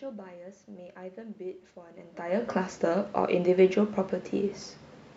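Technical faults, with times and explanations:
No technical faults, with times and explanations, to give for this speech.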